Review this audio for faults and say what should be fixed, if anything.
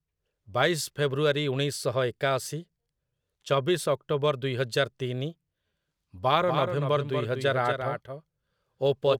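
A doubled audio track starts abruptly at 6.42 s and runs to the end. A dry copy trails by about a fifth of a second, roughly 5 dB quieter. The likely cause is a second capture path or an out-of-step edit. Route the speech through one capture path and check edits for stray duplicate regions.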